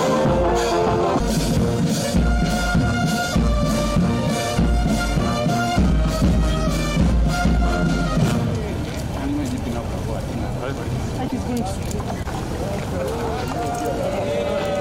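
At 11.27 to 11.33 s, a likely broken MP3 bit reservoir: frames went missing, so the next frames looked back for borrowed data and found bytes belonging to other frames. The audio jumps ahead, with a garbled glitch of about 56 ms, roughly two 26 ms MP3 frames.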